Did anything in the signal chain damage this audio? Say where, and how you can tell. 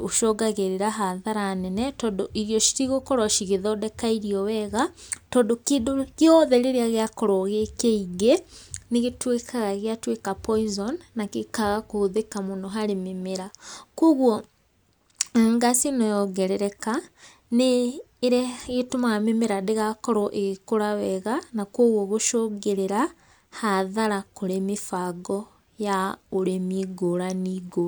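No, nothing in the chain has audibly damaged this speech recording, and the signal holds together as continuous, intact audio with no point where any stage left a mark.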